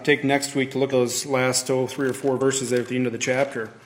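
Compressed frames are skipped at 0.89 s, where roughly 100 ms of audio vanishes, and at 2.37 s, with about 50 ms lost. The jumps match a 46.4 ms frame.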